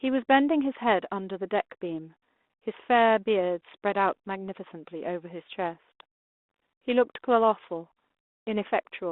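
Speech, and nothing is technically wrong with it.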